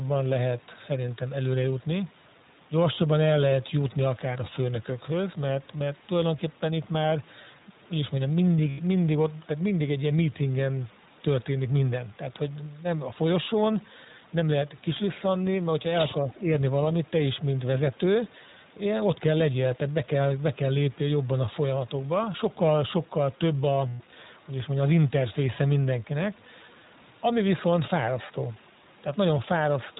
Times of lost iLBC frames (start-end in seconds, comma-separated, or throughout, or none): 8.70-8.79, 23.88-24.02